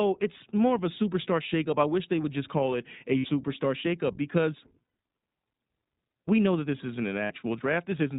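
iLBC codec, throughout the clip: the speech is narrowband, with nothing above 4 kHz. Each frame's excitation is coded on its own, which fits iLBC's 20 ms frame mode. The damage is plainly audible, a slightly rough, synthetic edge to the voice.

Lost iLBC frames, at 3.18–3.26 s after "just call it a" (about 60 ms), 4.84–4.96 s after "shakeup because" (about 120 ms), and 7.24–7.32 s after "that this isn't an" (about 60 ms): the decoder fills each gap by repeating the last pitch cycle mixed with noise. This sounds like a briefly held, buzzy vowel. Because each frame stands alone, the speech recovers almost at once.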